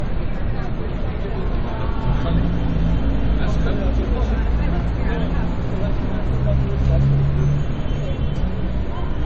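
From start to finish the audio sounds dull and smeared: nothing reaches above 8.2 kHz, and transients carry a watery, swirling texture typical of heavy MP3 coding. This is low-bitrate audio saved at a high bitrate. The material was likely first squeezed through an MP3 encoder at something like 32 kbit/s, then re-encoded as MP3 at a much higher rate, around 192 kbit/s. The second pass can't restore the missing top end or undo the smearing.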